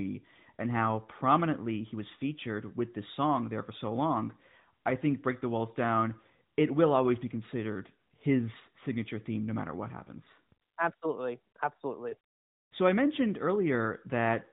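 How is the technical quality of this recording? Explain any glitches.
No glitches or faults are audible.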